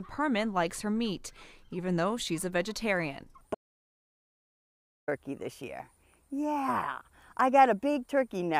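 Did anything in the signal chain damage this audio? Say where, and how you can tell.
Yes. The input path lost its signal at 3.55 s, most likely through a disconnected device, a failed link or an accidental mute, while the recorder kept writing silence until the source returned at 5.08 s. The result is an audio dropout to silence: the sound stops abruptly mid-flow and resumes just as abruptly, and the 1.53 s gap between is silence with no room tone at all. Whatever occurred during that stretch is gone.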